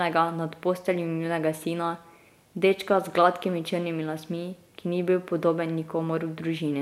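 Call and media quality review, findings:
Nothing stood out on listening to this speech recording.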